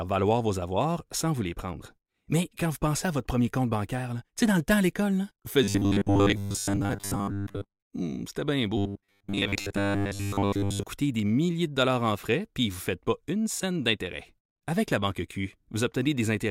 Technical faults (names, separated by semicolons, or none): robotic sound from repeated short buffers